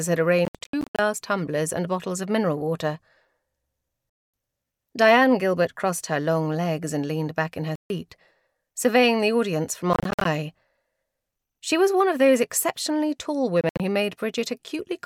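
Bluetooth dropouts break the audio at 0.45–0.99 s, 4.10–4.34 s, 7.76–7.90 s, 9.93–10.26 s and 13.61–13.80 s. The sound cuts to abrupt silences, some split into short gaps, then resumes further along, likely because wireless packets arrived too late and were discarded.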